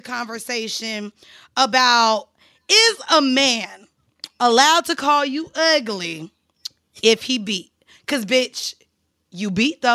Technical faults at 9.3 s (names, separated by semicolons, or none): none